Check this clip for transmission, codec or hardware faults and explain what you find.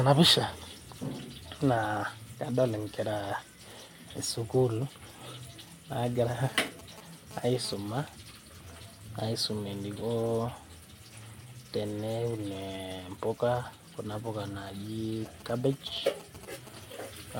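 Two bursts of mobile-phone interference are audible in this speech clip.

GSM phone buzz, 6.44 to 7.74 s: a nearby 2G phone transmitting data pulses its radio 216.7 times a second, and the audio circuitry rectifies those pulses. The result is a harsh, harmonic-rich 217 Hz rasp about 15 dB below the speech, starting and stopping with the data transfer.

GSM signalling bursts, 15.26 to 16.69 s: the phone sends only brief clusters of radio bursts at the same 216.7 Hz rate, which the circuitry again demodulates. These sound like a galloping dit-dit-dit of short 217 Hz buzzes, roughly 15 dB under the speech.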